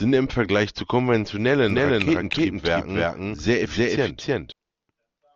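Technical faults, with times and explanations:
1.70 to 4.52 s, doubled audio track: the speech was likely captured a second time by a slower path and mixed back in, so an equally loud, dry, full-band copy trails roughly 0.3 s behind, starting and stopping abruptly.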